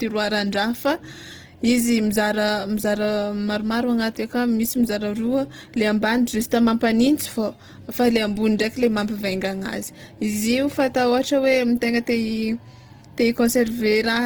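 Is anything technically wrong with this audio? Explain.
Yes, there's a problem running through the whole clip. The speech sounds rough and grainy, with a noisy, gritty texture where clean tone should be. That's likely Opus compression in its music (CELT) mode, squeezed hard enough that there aren't enough bits to code each band properly, so the encoder fills the gaps with folded or noise-like content. The damage is plainly audible and fits a low bitrate around 16 kbps, though the bandwidth stays full, reaching up to about 20.1 kHz.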